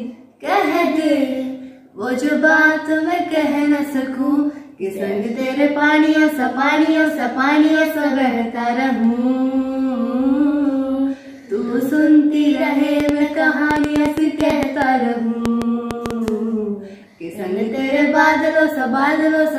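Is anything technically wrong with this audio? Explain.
Yes. From 13.00 to 16.29 s there is a train of clicks, about twenty at roughly five per second with uneven spacing. It was likely caused by interference or a faulty connection injecting pulses. They tick audibly over the sound, peaking well above it, showing as thin vertical spikes on the waveform and broadband vertical lines on a spectrogram.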